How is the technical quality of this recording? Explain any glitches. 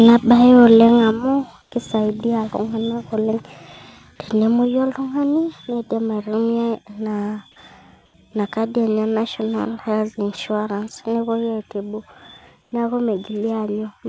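The speech is marred by a short burst of distortion, two sudden level drops and three brief stretches where the background turns flat, all heard over a call path whose sound stops at 8 kHz.

From 0.65 to 0.84 s the loudest syllables take on a harsh, crackly edge. This is microphone overload, likely from input gain set too high. The peaks overshoot the converter's ceiling by only about 1 dB, so a small fraction of samples are sliced flat, but that is enough to be audible.

The microphone volume is stepped down twice. At 1.11 s, just after the distorted peak, voice and background fall together by about 6 dB. At 4.65 s they drop again by about 4 dB. Each time the call software likely judged the input too hot and cut the device gain in one abrupt step rather than a gradual fade.

Comfort noise replaces the background three times: 1.62 to 1.72 s, 8.06 to 8.14 s and 12.62 to 12.72 s, lasting 100, 80 and 100 ms. 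During these gaps the background, normally about 40 dB below the loudest speech, becomes a smooth, featureless hiss about 3 to 5 dB quieter. The likely cause is that the sender paused transmission when it detected no speech, and the receiver filled the silence with synthetic noise shaped to resemble the missing background.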